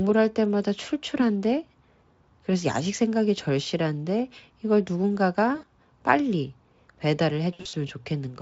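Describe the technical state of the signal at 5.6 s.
At 5.6 s the signal shows VoIP packet loss concealed by the speech codec, spanning 5.55 to 5.64 s. About 80 ms of audio went missing, which fits four 20 ms frames, and the Speex decoder filled the gap by repeating its last pitch period and spectral envelope at falling gain. The result is a brief buzzy tone or coloured noise that fades. A spectrogram shows a frozen spectral pattern that dims; the waveform shows a decaying stretch.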